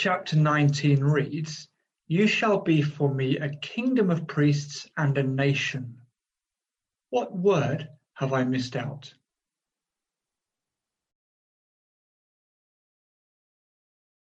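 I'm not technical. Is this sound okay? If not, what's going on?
Yes, nothing stood out as wrong when I listened to this sound.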